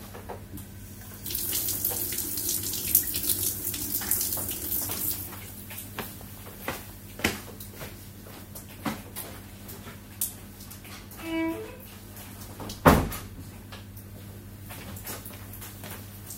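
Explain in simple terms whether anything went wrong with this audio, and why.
A brief chirp-like blip cuts into the sound from 8.35 to 8.38 s. This is a corrupt frame decoded: one compressed chunk of the audio was damaged, and the player decoded it anyway, briefly putting sound energy in the wrong places.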